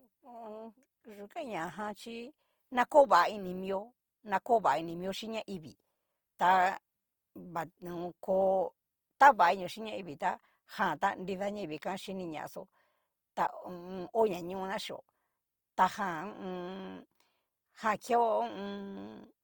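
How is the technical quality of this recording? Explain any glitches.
The recording carries plainly audible coding damage from start to finish. Throughout the speech, tonal parts sound rough, grainy and noisy, yet the full bandwidth survives without swirling holes. That points to Opus compression in its music (CELT) mode, likely near 24 kbps, where starved bands get refilled with folded or noise content.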